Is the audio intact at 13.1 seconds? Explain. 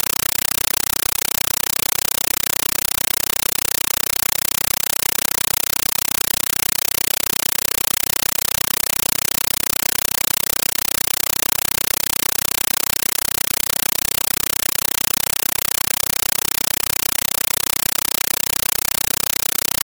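No. At 13.1 seconds, as throughout the clip, this is a compressed stream played as audio. Undecoded Dolby Digital data is treated as samples. Bursts of noise, each 8 ms long, repeat 31.25 times a second, consistent with a 384 kbps AC-3 stream. The result is loud, chattering static.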